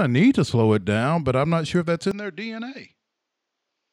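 Input switched to a poorer device at 2.11 s, right after "not sure if that's", running to the end. The capture likely moved to another microphone: content above 7.6 kHz vanishes, the level falls roughly 5 dB, and a faint new noise floor appears, with no gap.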